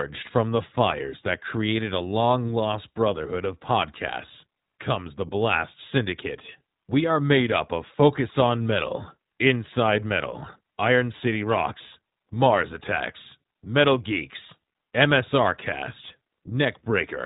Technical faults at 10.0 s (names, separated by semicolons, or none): iLBC codec